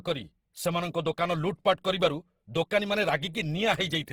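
Right through the speech there's plainly audible Opus compression damage, likely from the codec running at a low bitrate, around 16 kbps by the sound of it, in its music (CELT) mode. The band energies stay in place, but the detail inside them has been filled in with folded or noise-like content, so the voice comes across grainy and rough rather than swirly. Bandwidth isn't narrowed: content reaches up to about 20.2 kHz.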